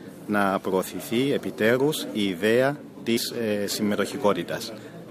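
At 3.16–3.18 s compressed frames are skipped: about 70 ms of sound vanishes, leaving a waveform jump and a vertical spectrogram smear.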